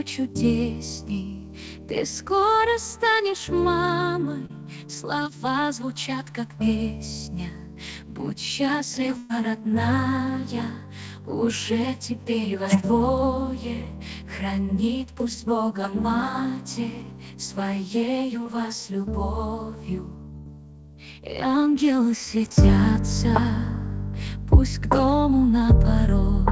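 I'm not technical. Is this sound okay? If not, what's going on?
No. A few moments went missing on the way through the call connection.

At 4.46, 5.23 and 18.43 seconds there is short concealed packet loss. Small pieces of audio, 20 to 40 milliseconds each, arrived too late, so the receiver stretched the preceding sound to cover each hole. You hear a quick smear or wobble.

At 9.17 to 9.31 seconds and 20.37 to 20.47 seconds there is a burst of packet loss. Longer stretches of about 120 and 80 milliseconds were lost. The receiver held the last sound and let it fade, then jumped ahead, so that piece of audio is simply gone.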